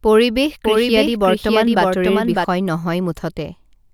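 A doubled audio track runs from 0.64 s to 2.44 s: a second, full-band copy of the speech trails the original by roughly 0.7 s, sitting around 5 dB quieter. It has no reverberant tail or room colouring, so it sounds like a flat overlapping repeat rather than an echo, and it cuts in and out abruptly at those points. The likely cause is the same signal being captured again through a slower path and mixed back in.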